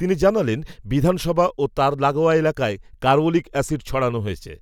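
Speech recording, with no technical fault to be heard anywhere in it. There is nothing to time and no cause to explain.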